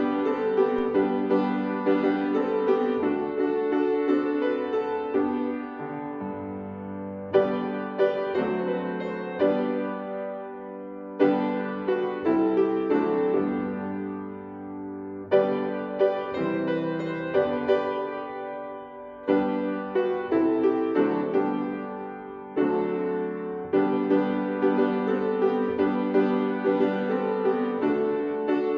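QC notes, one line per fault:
0.79 s, DC step: the waveform's zero line jumps suddenly by an offset of about -35 dBFS and then drains away through a 5 Hz high-pass. That abrupt shift is heard as a low thump or click, and the sound itself carries on unchanged.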